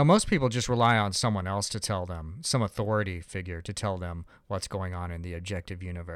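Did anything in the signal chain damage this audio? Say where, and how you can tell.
No, nothing in the signal chain damaged this audio.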